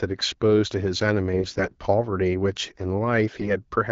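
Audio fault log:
1.34–1.72 s and 3.39–3.53 s: AMR bit errors. The sound stays at roughly its normal pitch and level but turns hoarse, scratchy and gargly. The less protected bits of the AMR-WB frames arrived corrupted while the check on the core bits still passed. The decoder therefore placed excitation pulses wrongly and used inaccurate fine pitch, gain and spectral values. The first burst points to roughly one bit in twenty flipped. The shorter second burst is rougher, at roughly one in ten.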